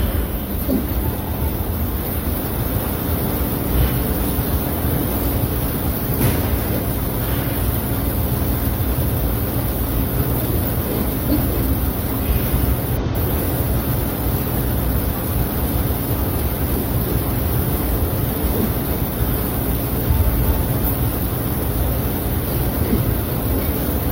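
Damaged data in a compressed stream produces brief glitches at 3.86–3.92, 9.94–9.99, 12.96–13.03, 17.88–17.93 and 23.64–23.68 s, each 40 to 70 ms long. The decoder misreads the corrupted frames and loses sync, so it searches for the next frame header.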